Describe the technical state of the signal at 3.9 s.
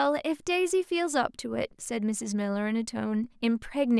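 At 3.9 s the speech signal is intact, with no audible fault at that moment.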